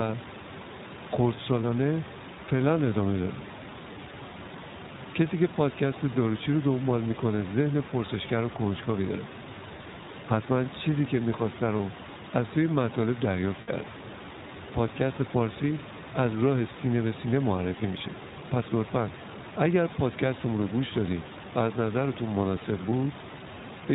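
Throughout, the speech has passed through the iLBC codec, which fits its 15.2 kbps mode with 20 ms frames. Each frame's excitation is coded independently and everything above 4 kHz is removed, so the voice sounds band-limited, plainly rough and somewhat synthetic. The room noise, about 13 dB below the speech, comes through coded as well.

Lost iLBC frames occur at 11.78 to 11.80 s (one 20 ms frame), 13.62 to 13.70 s (three frames, 60 ms) and 22.90 to 22.93 s (one 20 ms frame). Each time, the decoder repeats the last pitch cycle mixed with noise, producing a briefly held, buzzy or breathy vowel. The longest gap, at 13.62 s, fades as it continues. Normal speech returns almost immediately after each gap because iLBC frames stand alone.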